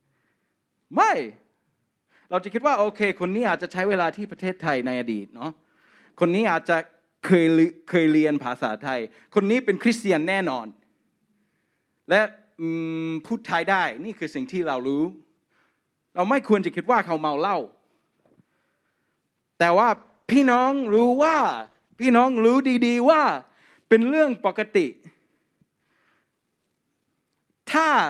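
At 2.83 s the speech turns rough and watery, and the top end narrows from about 20 kHz to 12 kHz. This is a call bitrate drop: the encoder was forced down to far fewer bits, consistent with a fall from about 48 to 15 kbps. The sound is worst for about 1.4 s and recovers by 6.79 s. The same drop returns from 19.95 s to 23.13 s, bottoming out for nearly 1.9 s. Unlike packet loss, the sound never breaks into gaps or clicks. It degrades and then recovers.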